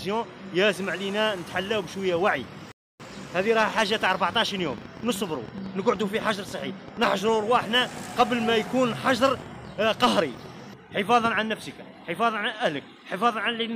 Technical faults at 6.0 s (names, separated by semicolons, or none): train of clicks